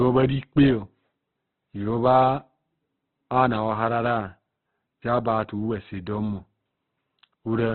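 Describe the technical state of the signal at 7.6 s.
At 7.6 s the speech is still passing through what is likely Opus compression at a very low rate, consistent with about 12 kbps, a fault that runs through the whole clip. Short of bits, the encoder trims the band to narrowband and fills thinly coded bands with folded or noise-like content instead of exact detail. Nothing is heard above 4.5 kHz, so the sound is muffled and dull, with heavy grainy, rough texture.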